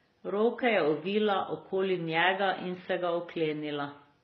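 Throughout the speech the top end stops dead at about 6.2 kHz, leaving it dull and boxy, while two different kinds of coding damage sit on top of each other: a swirly, metallic smearing and a grainy, bubbling roughness that never settles. This is likely transcoding between lossy codecs, with a low-rate MP3-style encode re-encoded into something like HE-AAC. The second encoder wastes its few bits reproducing the first one's artefacts, adds its own, and keeps the lower cut-off.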